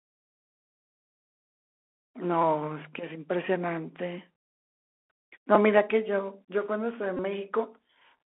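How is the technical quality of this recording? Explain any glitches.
The recording has plainly audible narrowband damage throughout, plus three short glitches.

The Bluetooth CVSD headset codec runs for the whole clip. The sound is squeezed into roughly 300 Hz to 3.4 kHz, which fits a 64 kbps CVSD link. The codec sends only up or down steps with an adapting size. Fast loud highs outrun it. So s sounds turn scratchy, and a grainy hiss sits underneath.

There is a repeated buffer at 2.42 s and another at 5.55 s. Fresh audio arrived late, so the device replayed its last 5.8 ms chunk. That fits a 256-sample buffer. The chunk plays three extra times at 2.42 s and twice at 5.55 s. Nothing is dropped. Each event is a brief clicky buzz with hard joins.

A Bluetooth headset packet repeated from 7.17 to 7.20 s. About 18.8 ms of voice packets between headset and phone went missing, which points to roughly five lost packets. 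The chip decoded the last packet again and again, every 3.75 ms. That makes a short, steady buzz near 267 Hz.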